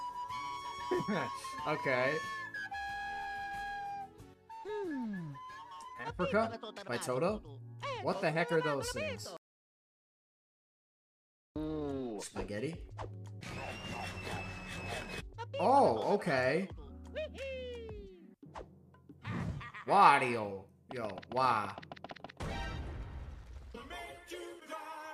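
The audio has one audio dropout to silence, running from 9.37 s to 11.56 s. The sound cuts off abruptly mid-flow and returns just as abruptly about 2.19 s later. The gap is silent with no room tone or noise floor, so whatever occurred during it is unrecoverable. The cause is likely a brief loss of the input signal, such as a disconnected device, a failed link or an accidental mute, while the recorder kept writing silence.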